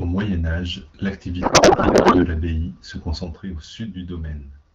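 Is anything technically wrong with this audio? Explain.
Yes, there are two faults in this speech clip.

A codec payload misread runs from 1.42 to 2.26 s. The receiver is unpacking the AMR frames with the wrong bit layout, and the sound points to octet-aligned data being read as bandwidth-efficient. With every field shifted, the decoder turns the speech into garbled noise and warble that barely tracks it.

A sudden gain jump at 3.24 s drops the level by about 6 dB for the rest of the clip. Speech and background noise fall together in a single step with no fade. This is likely a digital gain change applied without a ramp.

The AMR wideband (HD Voice) codec at 12.65 kbit/s leaves only light coding traces.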